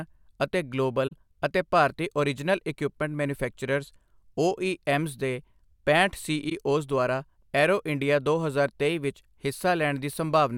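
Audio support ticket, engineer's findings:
AAC frame loss with muting. Soft-edged dropouts at 1.07–1.13 s, before "ਅਤੇ ਭਾਰਤੀ ਓਰਿਜਨਲ ਇਕੁਇਪਮੈਂਟ", and 6.49–6.52 s, after "ਦੇ ਪੈਂਹਠ". Decoder zeroed the lost spectrum. Window overlap fades the gaps. Gaps of about 43 ms and 21 ms fit two frames and one frame lost.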